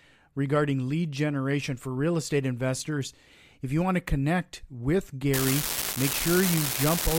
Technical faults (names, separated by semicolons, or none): unreliable data bit